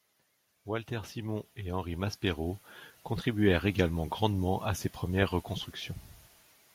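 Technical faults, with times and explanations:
0.65–2.69 s, automatic gain rising: over about two seconds the whole signal climbs by about 8 dB, speech and room background together, levelling off just before "contribuèrent également grandement à". The automatic gain control judged the input too quiet and eased its gain upward. Because the noise floor swells in step with the speech, this is processing gain rather than the talker speaking louder or moving closer, and the slow, smooth ramp rules out an abrupt level jump.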